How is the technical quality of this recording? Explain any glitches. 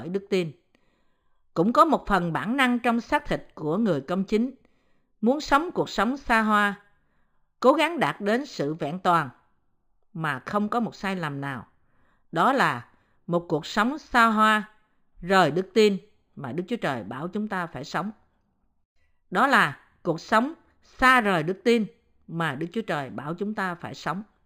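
The recording's technical quality is held back by one fault that runs through the whole speech clip. Imaging from linear upsampling is present throughout. The rate was raised by joining samples with straight lines, and the band limit near 5.5 kHz fits an original rate of about 11 kHz. That weak filtering dulls the top end and leaves a mirrored copy between 5.5 kHz and 11 kHz, roughly 30 dB down, heard as a faint metallic shimmer on sibilants.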